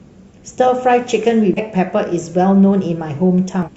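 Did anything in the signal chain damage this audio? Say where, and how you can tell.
Yes, damaged data in a compressed stream at the codec stage: brief disruptions at 1.54–1.59 s and 3.63–3.69 s. Corrupted bytes make the decoder misread frames and lose sync. A spectrogram shows short disruptions breaking the speech's harmonic structure.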